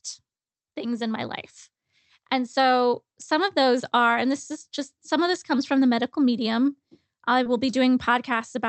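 At about 7.43 to 7.47 s, just after "the medical medium I", a short concealed packet loss occurs: roughly 20 ms of the call arrived too late for the decoder, so the receiver extrapolated the preceding sound to cover the gap before crossfading back into the real signal. The result is a brief smear in the speech, heard through the Opus call path with its top end cut off around 8 kHz.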